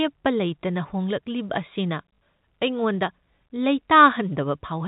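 At 2.14 to 2.18 s, packet loss occurred and the last packet was repeated to fill the 40 ms gap, which fits two lost 20 ms packets. The repeat makes the speech stutter briefly, buzzing near 50 Hz.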